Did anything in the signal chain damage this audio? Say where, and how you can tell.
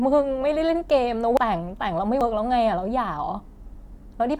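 Yes, at the codec stage. The speech jumps forward twice: at 1.37 s about half a second of audio is simply gone, and at 2.21 s roughly a tenth of a second is lost. These are compressed frames skipped. Whole frames were missing or rejected by the decoder as damaged, and both gaps are multiples of a step of about 93 ms, which fits the codec's frame length.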